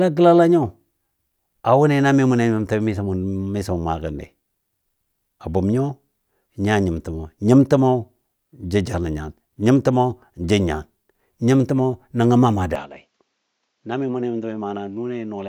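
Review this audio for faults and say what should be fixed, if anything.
At 12.76 s the speech abruptly turns duller and runs that way to the end, with no gap at the change, most likely because the input switched to a poorer device. A spectrogram shows energy suddenly cut off above 7.6 kHz, with a faint new noise floor around 50 dB down, and the waveform drops about 5 dB. Locking the recording input to one device, with automatic switching disabled, would prevent this.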